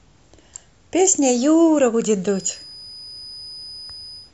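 From 2.24 s to the end, a thin feedback whistle at 5 kHz sits well below the speech, swelling and fading slowly in level. A loudspeaker-to-microphone loop likely hovered just short of runaway. Unlike full howl-round, it never builds into a howl.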